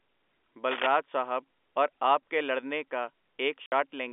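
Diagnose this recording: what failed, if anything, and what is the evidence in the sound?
A burst of dense, uneven scratching and rustling runs from 0.71 to 0.87 s, just before "ਸਾਹਬ ਅੋਰ ਆਪ ਕੇ". It is roughly as loud as the speech itself. This is cable scratch noise from the analogue wiring stage, most likely a worn cable, connector or control being moved. Its contact resistance jumps about rapidly as it shifts, and those fluctuations ride directly on the signal as crackling noise.

Right after "ਆਪ ਕੇ ਲੜਨੇ ਕਾ", the speech drops out completely from 3.66 to 3.72 s, a 60 ms hole with abrupt edges. This is packet loss filled with silence at the network stage. The gap's length points to two consecutive lost packets of about 30 ms each, and the receiver played dead silence in their place instead of concealing them. The surrounding audio carries the narrow 300 Hz to 3.5 kHz band of G.711 telephone coding.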